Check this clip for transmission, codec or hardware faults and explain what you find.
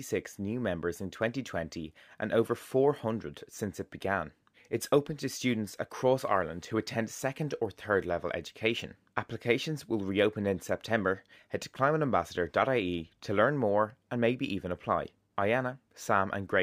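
One fault runs through the whole clip: imaging from linear upsampling. The top of the speech band sounds dulled, and sibilants carry a faint metallic shimmer. The sample rate was raised from 22 kHz to 44.1 kHz by drawing straight lines between samples. That is a weak interpolation filter. It softens the highs and leaves a mirrored copy of the spectrum from about 11 kHz to 22 kHz, roughly 35 dB below the speech.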